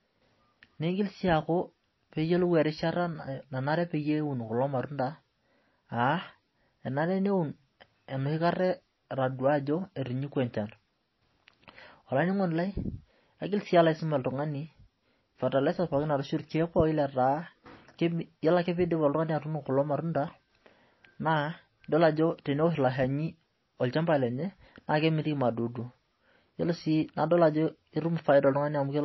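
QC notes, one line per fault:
Throughout, MP3 compression: the speech sounds dull and watery, with a swirling, warbling texture on the s sounds and blurred consonant onsets, and nothing at all comes through above 5.8 kHz. This is likely a heavily squeezed MP3 encode, consistent with a low bitrate of about 24 kbps. The encoder has cut the treble at a fixed point and dropped quieter frequency detail, which flickers in and out from frame to frame and smears the attacks.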